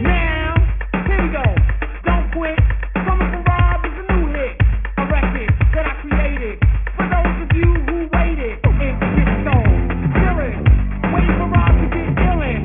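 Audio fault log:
Throughout: aliasing. Content above 3 kHz folds back as gritty, unrelated tones about 15 dB below the signal, which fits an unfiltered drop to a 6 kHz rate.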